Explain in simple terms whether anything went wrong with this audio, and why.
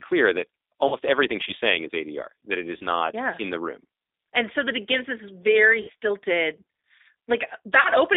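The G.729 codec shapes the whole recording. It is a phone-call codec that doesn't send the sound itself. It sends a compact description: the shape of the throat and mouth, the pitch, and a few pulses, and the far end rebuilds the speech from that. Only the band from about 250 Hz to 3.7 kHz gets through, so the speech sounds thin, slightly rough and a little synthetic, and the damage is plainly audible.

VoIP packet loss concealed by the speech codec happens four times: at 0.88–0.96 s, 2.77–2.85 s, 5.82–5.91 s and 7.81–7.90 s. Each time, a short stretch of the call never arrived. About 40 ms went missing in three of the gaps, and about 60 ms at 5.82 s. The decoder filled the hole by guessing: it kept repeating the last pitch and mouth shape while turning the volume down, so the sound smears into a fading buzz or noise. Because each rebuilt moment depends on the one before, the speech stays weak or distorted briefly after each gap.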